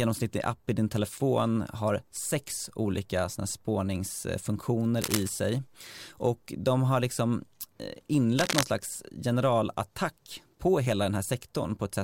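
Cable scratch noise at 5.01–5.29 s and 8.39–8.64 s: rustling bursts, likely a worn connector whose contact resistance shifts. It shows as ragged broadband spectrogram smears and jagged waveform spikes.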